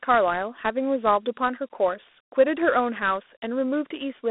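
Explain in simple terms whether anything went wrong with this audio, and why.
Dialogic VOX ADPCM affects the whole clip, start to finish. Each sample is stored as a tiny 4-bit step guessed from the one before, so the speech carries a gritty hiss. The sound is squeezed into a phone-like band, with nothing above 3.9 kHz.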